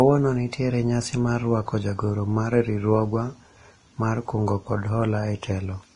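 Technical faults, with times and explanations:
Throughout: Vorbis compression. The speech has likely passed through the Vorbis codec at a low setting, with the grainy sound pointing to a bitrate of around 30 kbps. The encoder has removed everything above 10.6 kHz and quantised the remaining treble so coarsely that its fine detail turns into noise of similar energy. That is why the voice sounds hissy and rough, with smeared consonant onsets and a dull upper edge.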